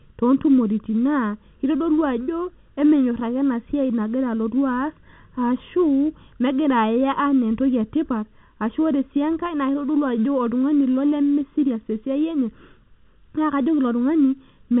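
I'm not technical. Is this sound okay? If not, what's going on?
No. Channel delay (comb filtering) runs through the whole clip. One side of the recording arrives a tiny fraction of a second late, just under a millisecond, and the two sides are then mixed together. What the two sides share cancels out at certain pitches, the first around 700 Hz and more at regular steps above it. That gives the speech its hollow, phasey sound. The telephone-style coding is working as it should, cutting everything off just under 4 kHz.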